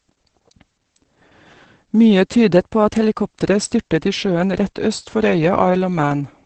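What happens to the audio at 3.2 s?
At 3.2 s the speech sits inside a drift correction step running from 2.54 to 3.43 s. Playback is about 6% faster there, and pitch rises about 102 cents, roughly a semitone. It then snaps back. The likely cause is clock-matching software jumping the rate to manage its buffer.

Opus voice compression is also present at this moment. The SILK coder leaves nothing above 8.6 kHz. Its coarse excitation makes the speech muffled, hoarse and slightly robotic. That heavy damage points to a very low bitrate, around 10 kbps.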